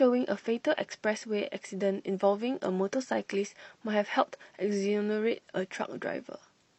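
At 2.09 s, compressed frames are skipped. Roughly one frame of the speech, about 50 ms, never plays. The decoder jumps ahead by one 46.4 ms frame.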